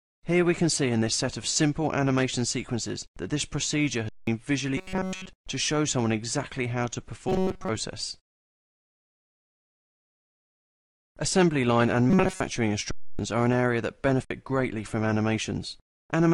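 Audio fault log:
4.09 to 4.27 s, underrun with held sample: the sound stops dead for about 0.19 s, going flat, then resumes. The output buffer ran dry and the converter held its last value; the gap length fits an 8192-sample buffer, and roughly 200 ms of live audio was lost.
4.77 to 5.29 s, 7.29 to 7.69 s and 12.10 to 12.41 s, robotic sound from repeated short buffers: a rigid, metallic buzz at 188 Hz appears. The likely cause is a starved stream repeating its last slice of about 5.3 ms. The first stretch is made entirely of repeats, and the later two are mostly repeats.
12.91 to 13.19 s and 14.25 s, underrun with held sample: the audio freezes flat for about 0.28 s, then again for about 58 ms. The converter held its last value while the buffer was empty, and roughly 300 ms and 50 ms of live audio were lost.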